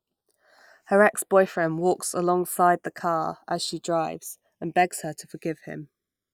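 Channels drifting apart, throughout the speech: the left and right sides run on clocks that disagree by roughly 150 parts per million, so their offset slowly grows to around half a millisecond. Heard in mono, comb notches sweep downward, giving a gradual flanging swirl.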